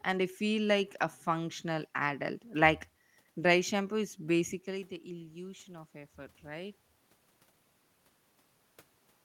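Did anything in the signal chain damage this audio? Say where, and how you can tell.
Yes. The damage comes from call processing, as automatic gain rising. Just after "dry shampoo is", around 4.5 s, the talker moves away and the input drops by about 14 dB. From 4.67 s to 6.85 s the level then creeps back up by about 4 dB. The room noise swells along with the voice. That shared, gradual rise over two seconds marks the gain control, not the talker. It judged the input too quiet and slowly raised its gain.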